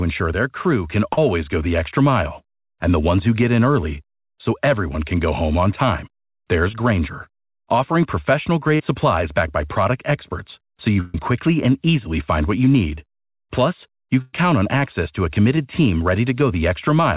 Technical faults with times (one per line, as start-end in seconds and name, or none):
1.13-1.18 short concealed packet loss
6.72-6.74 short concealed packet loss
8.75-8.80 short concealed packet loss
11.00-11.20 burst of packet loss
14.21-14.34 burst of packet loss
15.56-15.58 short concealed packet loss